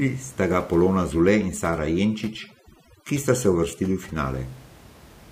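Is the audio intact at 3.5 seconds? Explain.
No. At 3.5 seconds the speech falls inside a stretch of overdone noise removal running from about 1.06 to 4.16 s. A noise reducer set far too aggressively is pulling individual frequency bands down or out whenever they sit close to its noise estimate, and the softer parts of the speech are removed with them. The background drops and breaks up into twinkling, warbling specks. The room noise, about 24 dB below the speech, belongs to the recording itself.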